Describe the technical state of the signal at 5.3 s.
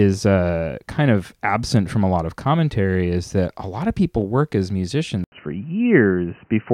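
An input switch to a poorer device runs from 5.24 s to 6.73 s, right after "of people work as": an 80 ms gap, then band capped at 3 kHz, new background noise, shifted level, likely a changed input.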